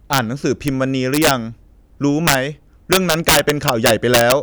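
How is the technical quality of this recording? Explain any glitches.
The speech is marred by violent cracks on its loudest moments, from integer overflow at 0.13–0.18 s, 0.68 s, 1.14–1.31 s, 2.28–2.35 s and 2.93–4.32 s. Peaks overshooting the integer limit by up to about 8 dB wrap to the opposite sign instead of being limited, snapping across the full range, harsher than clipping.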